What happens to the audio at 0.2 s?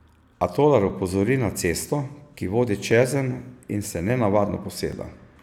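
Nothing goes wrong at 0.2 s; the speech runs through that moment intact, with no dropout, click or other fault.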